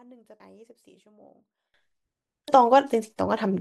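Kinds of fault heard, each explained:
One channel inverted, 0 to 1.74 s: the speech drops by about 26 dB and sounds faint. This is likely one stereo channel with reversed polarity, so the centred signal shared by both channels cancels on mono summing, leaving only their small difference.
Damaged data in a compressed stream, 0.40 to 0.43 s and at 2.48 s: brief blips break into the speech where the decoder met corrupted bytes in the compressed stream, misread those frames and had to resynchronise on the next frame header.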